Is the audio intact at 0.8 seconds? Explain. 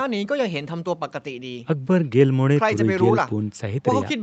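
Yes, the speech at 0.8 seconds is intact, with only the normal call microphone processing audible as a top end that stops at 8 kHz and trimmed lowest bass.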